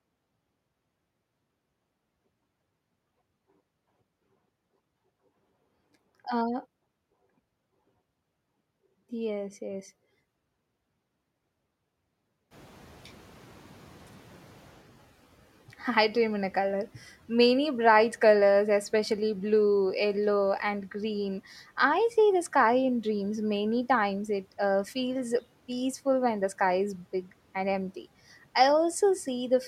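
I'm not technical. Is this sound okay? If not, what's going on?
No, there's a short hiccup. Around 12.5 seconds the background noise in the room suddenly gets louder, and the noise suppressor catching up is what you hear next. For about 2.4 seconds, from 12.5 to 14.9 s, the noise comes through stronger than it should, because the cleanup has to relearn how loud the background is. By 14.9 s it has adjusted and the noise drops back well below the speech.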